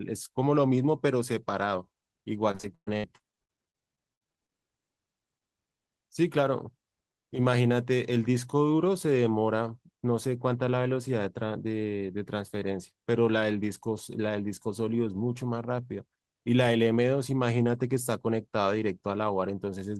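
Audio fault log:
2.51–4.53 s, repeated packet loss (robotic sound): sixteen holes, about 0.6 s missing, longest 118 ms, each patched by extending prior sound, giving choppy speech with pieces missing.
5.39 s, short concealed packet loss: about 20 ms never arrived and was filled from the preceding sound, leaving a brief smear or wobble.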